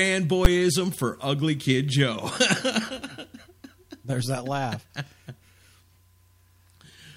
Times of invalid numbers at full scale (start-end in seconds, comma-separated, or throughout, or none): 0.45